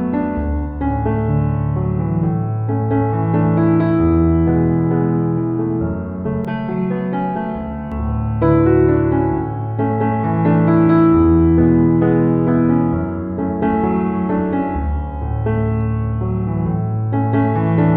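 The audio turns hollow and phasey from 6.45 to 7.92 s. This is channel delay (comb filtering). One channel runs roughly 5 ms behind the other. When they sum to mono, shared content cancels at evenly spaced frequencies, starting near 100 Hz.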